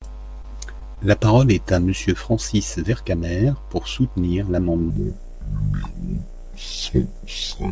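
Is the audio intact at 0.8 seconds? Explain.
No. From 0.80 to 0.83 s there is short concealed packet loss: about 20 ms of speech arrived too late to decode, and the receiver extended the preceding sound to cover it. This gives a brief smear rather than the silent gap of an unconcealed dropout.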